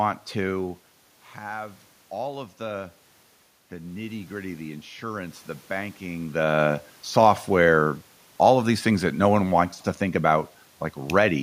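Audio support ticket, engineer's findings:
Automatic gain rising, 3.69 to 6.42 s, ending just before "software all of these". Input falls by about 11 dB. The capture-side AGC ramps gain up by about 4 dB over roughly 2.7 s, so the voice and the room noise swell together.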